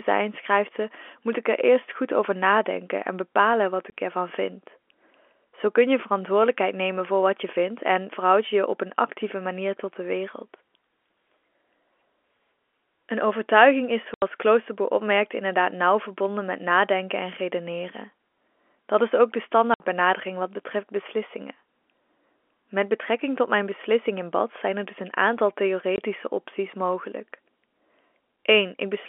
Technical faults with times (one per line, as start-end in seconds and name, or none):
3.90-3.92 packet loss filled with silence
14.14-14.22 packet loss filled with silence
19.74-19.80 packet loss filled with silence
25.96 packet loss filled with silence